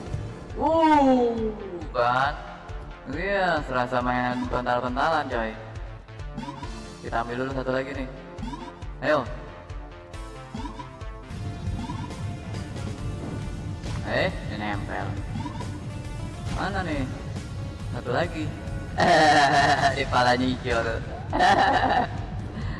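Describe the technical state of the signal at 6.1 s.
At 6.1 s the signal is intact, with no audible fault at that moment.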